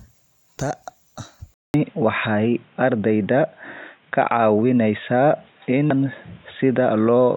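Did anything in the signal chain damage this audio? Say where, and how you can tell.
Yes. At 1.54 s the speech drops out for about 200 ms, then continues from a different-sounding source through to the end. Nothing above 3.8 kHz survives, the level shifts by roughly 5 dB, and a faint new noise floor appears well below the signal. This points to the input likely being switched to a poorer device at the driver or device stage. A codec lowpass would narrow the band, but it wouldn't bring the gap, the level jump or a fresh background noise.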